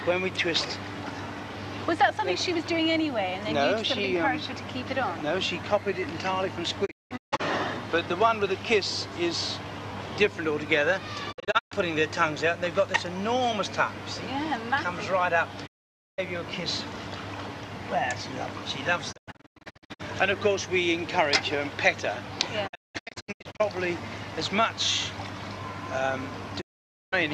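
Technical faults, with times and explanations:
6.85–7.41 s, 11.31–11.73 s, 15.65–16.20 s, 19.11–20.01 s, 22.66–23.61 s and 26.60–27.14 s: digital broadcast dropout. Each time the receiver stopped getting good frames and muted, fading out and back in over about 20 ms. At 15.65 s and 26.60 s it is a single silence of about 0.5 s. The other four break into several short holes, with the longest up to 0.19 s. The hole lengths move in 24 ms steps, which fits lost 24 ms frames. The audio sent during these gaps is gone.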